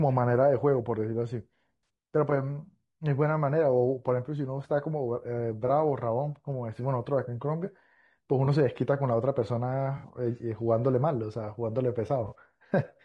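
Throughout this speech recording the voice is rough and grainy, with noise filling the gaps between pitch harmonics and a thin, somewhat synthetic top band. That points to low-delay AAC compression, likely AAC-ELD at a low bitrate around 32 kbps. Its short frames resolve voiced harmonics poorly, so the damage is plainly audible. AAC frame loss with concealment also appears as brief smeared, noisy patches at 1.83 s, 5.67 to 5.70 s, 8.45 to 8.48 s, 9.97 to 10.08 s and 12.27 to 12.34 s. Each fits the decoder bridging a gap of 20 to 60 ms by reusing the last good spectrum, which fits one to three consecutive lost frames. The longer gaps near 1.83 s and 10.0 s each cover 60 ms.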